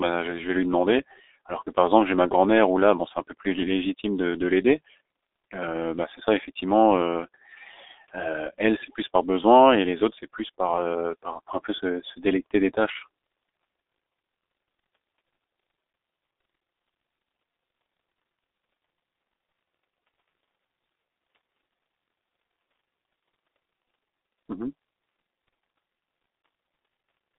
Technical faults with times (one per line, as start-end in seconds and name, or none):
0.00-27.39 G.723.1 codec